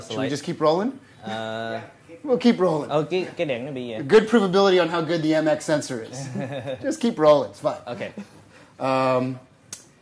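Nothing stood out on listening to the clip.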